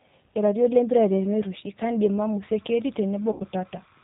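Throughout, the speech carries G.729 codec damage at 8 kbit/s. Nothing passes above 4 kHz, and the rough, synthetic edge sets it apart from simple band-limiting.

From 2.41 s to the end, timecode bleed adds a faint chirping warble well below the speech, switching near 1 and 2 kHz at a 29.97 frame-per-second rhythm. That rhythm distinguishes it from a steady whistle.

From 3.32 to 3.42 s, VoIP packet loss concealed by the speech codec smears about 80 ms, which fits four 20 ms packets, into a fading buzzy tone or coloured noise. It decays rather than clicking or dropping to silence.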